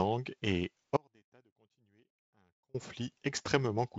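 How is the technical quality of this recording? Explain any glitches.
The speech drops out from 0.97 to 2.74 s, an audio dropout to a faint residue lasting about 1.8 s. The signal likely broke while the path stayed live, leaving a faint leak about 35 dB down. The abrupt edges set it apart from a pause or fade. The band-limited G.722 wideband sound tops out near 7.8 kHz.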